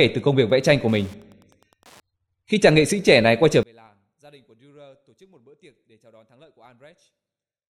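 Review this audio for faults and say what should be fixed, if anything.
From 0.0 to 2.0 s there is Wi-Fi interference: a nearby radio's beacon, repeating every 102.4 ms, is rectified by the audio circuit into a steady ticking about ten times a second, well below the speech. A spectrogram shows evenly spaced thin vertical lines across the band. Keep Wi-Fi radios and routers away from microphones, preamps and unshielded cables.

From 3.63 s to the end, the speech drops by about 35 dB and turns faint, the likely cause being one channel inverted, so the shared centre content cancels when left and right are summed to mono. The waveform collapses to a sliver, and the spectrogram empties. Check polarity on each channel before any mono fold-down.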